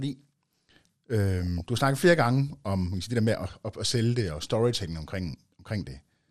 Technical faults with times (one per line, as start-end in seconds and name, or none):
0.00-6.31 MP2 compression
1.43-1.60 DAB burbling
3.45-3.75 DAB burbling